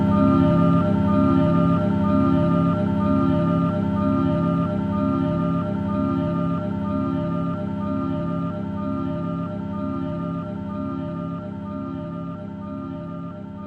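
It's a recording of everyday sounds, about 14 seconds long, and the damage runs the whole way through: the top end sounds dull, with upper bands fading in and out, and what's left has a gurgly, grainy roughness. That's the signature of MP2 compression, likely at a low rate, something around 80 kbps. Layer II splits the spectrum into 32 sub-bands and runs short of bits, so it drops the highest bands and quantises the rest coarsely.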